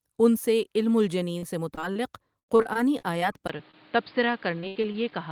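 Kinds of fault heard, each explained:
Repeated packet loss (robotic sound): Gaps patched by repeating the last sound. Choppy, robotic stretches at 1.38–1.96 s, 2.39–3.22 s and 4.60–5.12 s.
Input switched to a poorer device: From 3.48 s, a 20 ms silence, then duller sound with nothing above 5 kHz and new background noise. The likely cause is a change to a poorer input.
Short concealed packet loss: Brief holes filled by continuing the previous sound. Heard as short smears at 3.58 s and 3.71–3.74 s.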